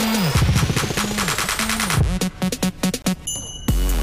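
At 3.02 s the wireless link likely suffered a Bluetooth stall: interference held back incoming packets, the receiving buffer emptied before the retransmissions arrived, and playback had nothing to output. The result is a short dropout to silence lasting about 23 ms, ending at 3.04 s, after which the sound resumes abruptly.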